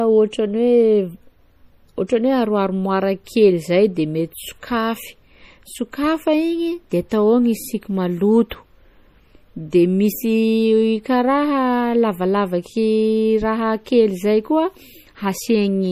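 From start to end, the speech carries plainly audible MP3 compression damage. Weak frequency detail flickers in and out between frames, giving a watery, swirly texture. Nothing remains above 15.3 kHz. The cause is likely MP3 encoding at a low bitrate, fitting roughly 40 kbps.

At 8.50 s there is pre-echo. A short hiss runs ahead of a sharp attack, spreading about 16 ms before it. The codec spread its coding noise across the whole block, so the quiet moment filled with noise.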